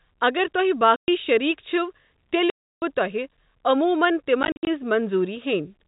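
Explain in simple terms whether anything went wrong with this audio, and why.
The speech drops out into dead silence three times. The first gap runs from 0.96 to 1.08 s, right after "اگر تۄہہِ". The second is longer, from 2.5 to 2.82 s, just before "تۄہہِ عموٗمَن". The third, from 4.43 to 4.67 s after "تۄہہِ عموٗمَن", is broken into several short holes rather than one. This is packet loss filled with silence. Chunks of sound were lost in transit, and the receiver played nothing in their place. The gap lengths fit 10 ms packets. The telephone-style sound of the G.711 coding is as expected.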